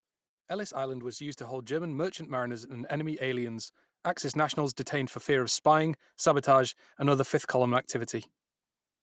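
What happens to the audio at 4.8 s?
At 4.8 s you're early in an automatic gain rise that runs from 4.32 to 7.93 s. The AGC decided the input was too quiet and eased its gain up by about 6 dB, so the speech and the background noise swell together over those few seconds.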